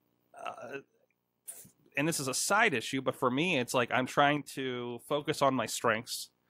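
From 0.76 to 1.48 s, ending just before "and this is a", and again from 4.37 to 5.21 s, after "me it's like I'm", the speech drops abruptly by about 6 dB, likely one channel drops out. Waveform and spectrogram show sharp-edged, uniformly fainter blocks.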